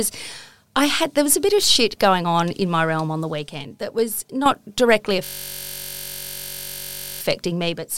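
Speech. At 5.25 s the system froze while the hardware kept replaying one 21.33 ms buffer, fitting 1024 samples: a system hang loop, buzzing steadily at 46.9 Hz until 7.21 s.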